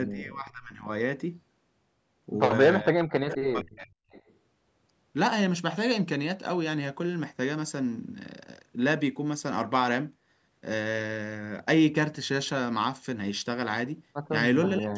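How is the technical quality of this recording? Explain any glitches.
The speech has two call-processing glitches: it repeatedly ducks or breaks up, and delayed copies of it come back.

Speech suppressed in double talk: from 0.12 to 0.88 s, 2.82 to 3.93 s and 14.78 s to the end, the speech sinks by about 25, 40 and 30 dB, thinning or cutting out. Likely an echo canceller, confused by both sides talking, turned everything down.

Echo leak: at 3.31 to 3.35 s, 4.1 to 4.34 s and 14.65 to 14.78 s, brief scraps of speech repeat 466 ms late, about 10, 25 and 15 dB below the speech. Likely a loudspeaker's sound reached a microphone and slipped past its echo canceller.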